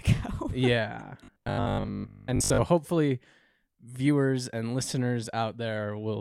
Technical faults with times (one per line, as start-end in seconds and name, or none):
1.24-2.62 robotic sound from repeated short buffers